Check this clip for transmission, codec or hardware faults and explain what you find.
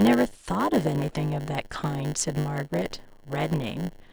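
There's one fault here, and it runs the whole length of the speech: a block size mismatch with zero padding. One stage is handing over blocks a bit shorter than the next stage expects, so each block gets topped up with silence. Those tiny gaps repeat at 100 Hz, giving a steady buzz under everything, and the padding stretches the timeline so the speech plays at about 0.92 times normal speed while the timbre stays put.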